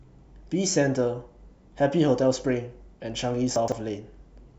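Speech, with chunks out of order from 3.56 to 3.72 s: one 40 ms chunk plays three chunks late, giving a jumbled moment with three hard joins, unlike a dropout, since nothing is missing.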